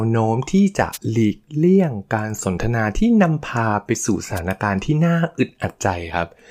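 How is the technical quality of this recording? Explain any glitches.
The recording carries two brief dropouts typical of a radio microphone link; nothing else is flagged here.

Wireless microphone noise hits occur at 0.92 to 0.98 s and again at 4.35 to 4.40 s, each lasting roughly 55 ms. The analogue FM signal from the transmitter momentarily faded as reflected paths cancelled the direct one, letting the receiver's own noise surge up over the speech. Each hit is heard as a short swish of static.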